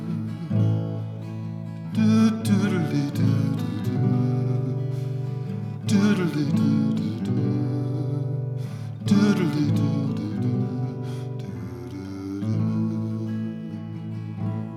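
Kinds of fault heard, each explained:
No faults turn up anywhere in this one, so there's nothing to list.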